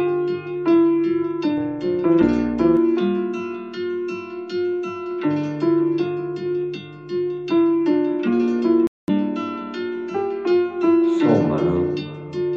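From 1.57 to 2.77 s the level pulses at around 150 times a second, rising and falling by about 6 dB. The result is a metallic buzz with extra tones around each note. This is overlap-add ripple: the audio was split into windowed frames and rebuilt with overlaps whose gains do not sum evenly, so each frame boundary leaves a dip. Unlike a dropout, the sound never stops. It keeps going, but with a steady frame-rate buzz.

At 8.87 s the audio cuts out and returns at 9.10 s after a silence of about 209 ms. It picks up further along rather than where it left off, as though it kept playing through the gap. That skip-ahead resumption marks it as a likely Bluetooth dropout, where packets arrived too late for the headphones and were discarded. A stall or buffer underrun would instead pause and then continue from the same point.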